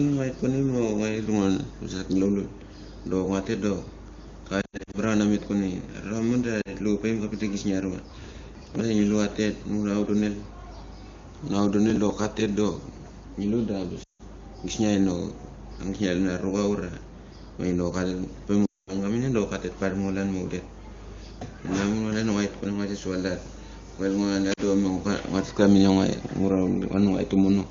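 Speech carried over AMR wideband (HD Voice), with the faint codec coloring of a high bitrate. Lost AMR speech frames break it five times. The decoder fills each gap by repeating the last good pitch and vocal tract settings at falling gain. At 4.61 to 4.99 s, about 180 ms are lost in patches across 320 ms, with runs up to 80 ms, so the voice warbles and dips. Short 40 ms losses at 6.61 s and 24.53 s cause brief dips. Longer losses at 14.03 to 14.22 s and 18.65 to 18.96 s fade the sound quickly toward silence, and leave it weak and rough as it returns. Processor overload crackle appears at 8.1 to 8.81 s and 11.90 to 12.11 s. The processor misses its deadlines for many small buffers in a row, which fits buffers of about 5 ms. Each missed buffer is skipped, leaving a tiny hard-edged gap. These gaps run together into gritty tearing over the speech. The longer burst holds dozens of skips, and the shorter one only a handful.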